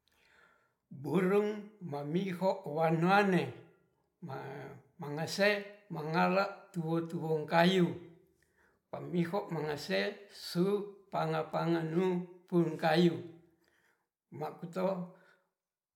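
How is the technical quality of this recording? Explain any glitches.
The recording has no audible technical faults; the signal stays steady and intact throughout, with no glitches to explain.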